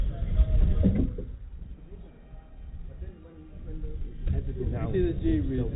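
No technical faults can be heard anywhere in the clip. It has come through a working call path, and the sound stops at about 4 kHz, which fits a narrowband G.711 mu-law call codec.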